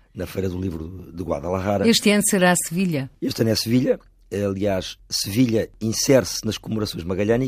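No technical faults are audible anywhere in this recording.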